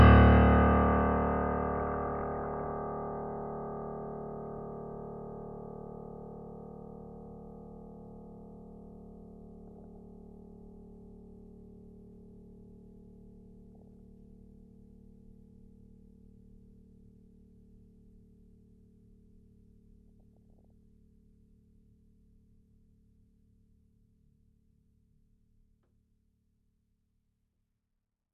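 DAB burbling at 1.78 to 2.70 s, 9.67 to 9.99 s, 13.75 to 13.93 s and 20.20 to 20.71 s: with bit errors under one percent, corrupted sub-band values briefly jump, making short blips of noise in single sub-bands over the music rather than dropouts or steady swirl.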